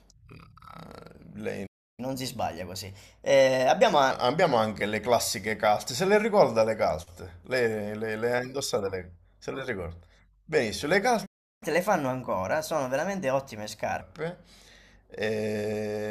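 At 1.66 s the speech cuts out for about 0.32 s. This playback stall is likely the player starving for data. From 2.00 s to 4.11 s, catch-up at higher speed runs it 1.15 times fast, raising pitch by roughly two semitones. The same happens again. Silence runs from 11.26 s to 11.63 s, then sped-up catch-up lasts until 14.01 s.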